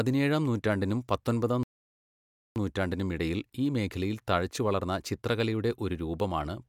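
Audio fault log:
1.63–2.56 s, playback stall: the player likely ran short of data or had its thread blocked, so output stopped feeding the speaker for about 0.93 s. The speech cuts off right after "നൂറ്റാണ്ടിനും പത്തൊൻപതാം" and the gap is plain silence, not a fade or a glitch, because nothing was being written out. When the player recovers, the speech picks up with "നൂറ്റാണ്ടിനും ഇടയിൽ ഈ മേഖലയിൽ".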